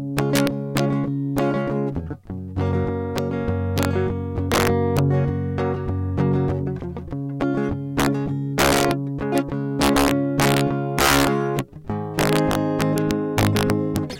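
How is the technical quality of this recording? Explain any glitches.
The technical quality is poor: integer overflow runs throughout this music. The signal is driven about 6 dB past full scale. A small fraction of samples exceed the limit and wrap to the opposite sign instead of being held. Each wrapped peak jumps across the full range. Loud moments break into violent, sharp cracks, far harsher than clipping.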